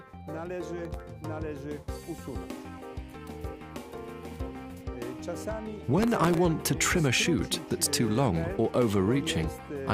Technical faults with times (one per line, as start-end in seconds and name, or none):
0.85-1.00 processor overload crackle
6.03-6.37 processor overload crackle